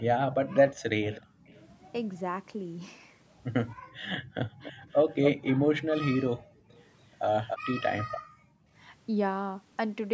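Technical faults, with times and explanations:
0.0–2.49 s, 4.63–5.47 s and 6.71–8.2 s: echo leak. A delayed copy of the voice trails the talker, about 25 dB down at first, lagging 323 ms. Later it lags 285 ms and is much louder, about 5 then 10 dB below. A loudspeaker-side echo canceller likely let it through.
0.43–1.47 s, 3.81–4.3 s, 6.39–6.7 s and 8.2–8.71 s: background gated by the echo canceller. The room sound drops by up to about 40 dB in short holes, each lasting a fraction of a second. The canceller is clamping the microphone while the far end plays.
4.58–4.82 s: speech suppressed in double talk. The talker's voice dips by roughly 40 dB in brief pieces just as the loud echo starts. Both sides overlap here, and the canceller likely cannot separate them, so it turns everything down together.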